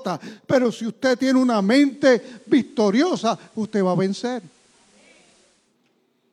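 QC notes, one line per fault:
1.68–5.78 s, digital radio blending to analogue: after "si usted tiene una" the speech cross-fades over 0.37 s to FM, adding faint hiss and dropping about 1 dB, then returns. The hiss distinguishes it from a mere codec bandwidth drop.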